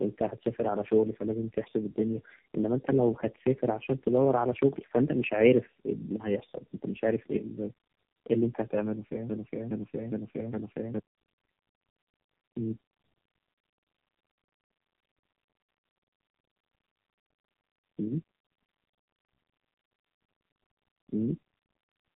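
Throughout, tandem speech coding: three speech coders in turn each re-coded the last one's output, leaving speech rough, warbly and muffled, cut off above 3.8 kHz.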